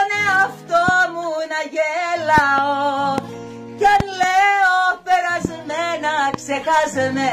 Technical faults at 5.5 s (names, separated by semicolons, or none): loud pop